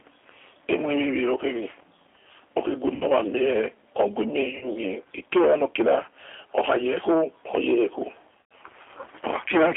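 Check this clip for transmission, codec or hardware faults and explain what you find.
Two faults are present: G.729 coding throughout the speech, and three short dropouts patched over by the codec's own concealment.

G.729 codec, throughout: the speech sounds thin, slightly rough and synthetic, confined to roughly 300 Hz to 3.4 kHz, with plainly audible codec damage. That points to G.729A at 8 kbit/s. This codec discards the waveform and rebuilds each 10 ms frame from a vocal tract filter, a pitch predictor and a handful of pulses. The result is intelligible but grainy and artificial, with nothing above 4 kHz surviving.

VoIP packet loss concealed by the speech codec, at 2.95 to 3.05 s (just before "wa mie oghue"), 4.57 to 4.67 s, and 8.52 s: at each point the speech briefly stretches into a buzzy tone or coloured noise that fades, then returns weak or distorted before recovering. The gaps cover about 60 ms, 40 ms and 100 ms of lost audio, with the last being the longest. 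The decoder filled each gap by repeating its last pitch and filter settings at falling gain. Because every frame builds on the previous one, the damage lingers after the missing audio returns.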